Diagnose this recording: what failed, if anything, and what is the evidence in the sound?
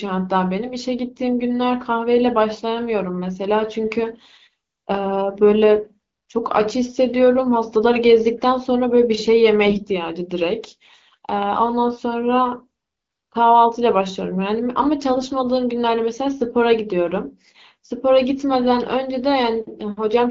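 The failure is at the network stage: on a weak radio link, the less protected bits of the AMR-WB frames arrived corrupted while the checksum on the core bits still passed, so the decoder played them as valid. Around 9.65 to 9.86 s, with roughly 7 percent of bits wrong, and again from 15.14 to 15.28 s, at about 4 percent, the speech keeps its rough pitch and level but turns hoarse, scratchy and gargly. This happens because the excitation pulses land in the wrong places and the fine gain and spectral values are off.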